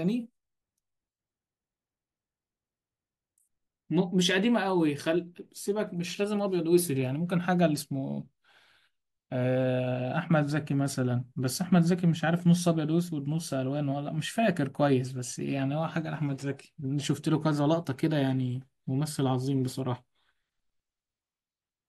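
No technical faults are audible anywhere in the recording.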